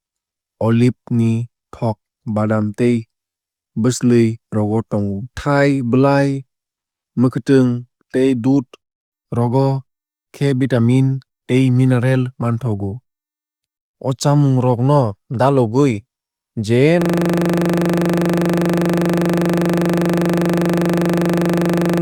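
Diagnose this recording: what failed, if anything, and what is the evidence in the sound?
At 17.02 s the speech stops and turns into a steady buzz pitched at 25 Hz that runs unchanged to the end of the clip. That buzz is one 40 ms slice of audio repeating exactly, over and over. This is a system hang loop at the driver or buffer stage: the host or driver froze while the audio hardware kept replaying the same ring buffer, which points to a buffer about 40 ms long.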